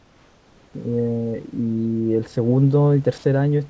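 From the start to 0.74 s the room background is swapped for comfort noise: a flat, featureless hiss about 3 dB quieter, likely from the sender pausing transmission. At 3.18 s, for 60 ms, the voice detector drops the sound; a short stretch of sound gives way to steady noise or near silence, likely because the detector judged it background. Both sit over a call path with nothing above 8 kHz.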